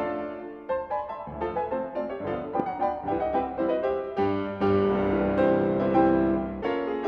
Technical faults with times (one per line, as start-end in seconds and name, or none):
2.60-2.62 loud pop